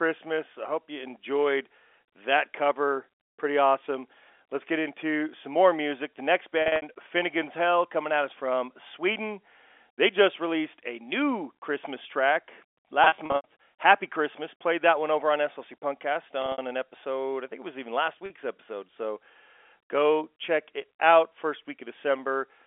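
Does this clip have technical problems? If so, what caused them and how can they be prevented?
Yes. Packet loss with pitch repetition occurs at 6.62–6.82 s, 13.04–13.44 s, 16.42–16.58 s and 18.26–18.30 s. Missing stretches of up to 80 ms were filled by repeating the last pitch period, producing brief held, buzzy patches in the telephone-band audio. Sending redundant or error-correcting packets over a more reliable network path would prevent this.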